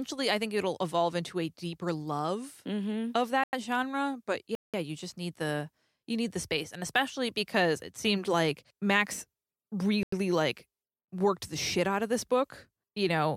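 From 3.44 to 3.53 s, 4.55 to 4.74 s and 10.03 to 10.12 s the speech falls into blocks of digital silence, about 93, 186 and 93 ms long, as unfilled output buffers become zeros, which fits 4096-sample buffers. Unlike a faded dropout, each hole cuts out and back abruptly.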